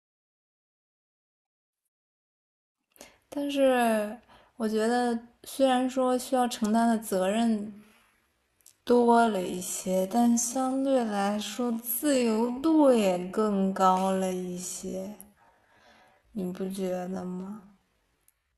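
From 7.57 s to the end, a time-stretched section slows the speech to about 0.56 speed while pitch holds steady, likely from software repeating short slices to lengthen it. It drags, and a spectrogram shows harmonics drawn out horizontally.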